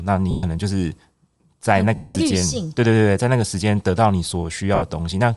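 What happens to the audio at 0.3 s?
From 0.31 to 0.43 s, lost LE Audio frames leave a 120 ms gap, which fits twelve dropped 10 ms frames. The decoder repeats the last spectrum with randomised signs and fades it, so the sound smears into noise and dies away. Throughout the clip the speech also has a grainy, breathy upper band, likely from Bluetooth LC3 compression at a rate around 48 kbps.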